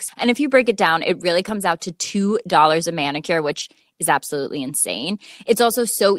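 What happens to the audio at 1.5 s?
From 1.47 to 1.57 s, a lost packet is rebuilt from error correction. About 60 ms of audio was lost. The following packets carried low-bitrate copies, and the decoder played those instead. There is no gap, but that stretch sounds rougher and noisier.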